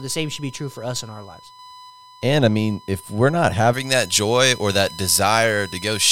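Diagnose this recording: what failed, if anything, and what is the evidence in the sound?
USB whine runs throughout as a steady 1 kHz tone, roughly 25 dB below the speech: bus frame current leaking through shared power or ground in the analogue wiring.

Pre-emphasis left on from 3.73 s, after "mean if we're not", to the end: treble about 11 dB hotter at 10 kHz, thin and sibilant, because the matching de-emphasis was never applied.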